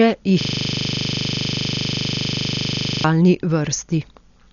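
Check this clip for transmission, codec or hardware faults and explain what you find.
Two faults are present: band-limited codec damage across the whole speech clip, and a frozen playback loop in the middle.

Throughout, the audio sounds dull and rough, with nothing above 6.9 kHz and a fluttering noise hugging tonal parts. This is likely heavy Dolby Digital compression at a low rate, around 48 kbps, where starved frequency lines are filled with noise. A spectrogram shows a hard ceiling and speckled, grainy harmonics.

From 0.41 to 3.04 s, a system hang loop replays one 40 ms piece of audio over and over while the player is stalled, so the sound hardware keeps cycling the same buffer. The piece repeats 25 times a second. The waveform shows an identical repeating block, and the spectrogram shows vertical stripes 40 ms apart.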